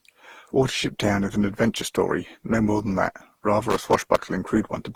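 From the start, the speech has a swirly, smeared and hollow quality, heavier than a single lossy encode would leave, with consonant attacks blurred and nothing above 20.4 kHz. This is generation loss, likely from around ten successive decode and re-encode passes through a codec such as Opus at a rate near 48 kbit/s. Each pass quantises again on a shifted frame grid, so noise and spectral holes build up instead of staying fixed.

From 3.70 to 4.24 s, just after "more than that rather", an irregular burst of crackle and scratching cuts into the signal. This is loose connector crackle: a worn or dirty contact rapidly making and breaking as it moves, chopping the audio into fragments. Any DC present on the line turns each make or break into a pop.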